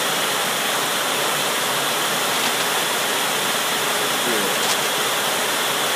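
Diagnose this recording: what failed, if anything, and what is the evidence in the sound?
Cable scratch noise in the analogue wiring. Scratching bursts, about 10 dB and 5 dB below the signal, run over the sound at 2.33–2.86 s and 4.55–4.89 s. Likely a worn contact shifting.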